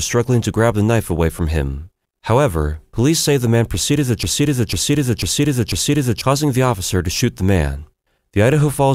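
From 4.23 s, just after "man proceeded to", a broken-record loop repeats one 0.50 s fragment exactly four times, back to back, until 6.21 s, when "causing the officer" follows. The stream likely stalled and kept resending its last fragment, so the speech in between is lost.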